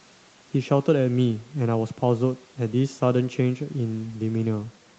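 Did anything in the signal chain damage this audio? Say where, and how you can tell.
No, nothing in the chain has damaged this speech: it has passed through a call's microphone processing, which has trimmed the lowest bass and leaves no content above 8 kHz, exactly as that stage normally does.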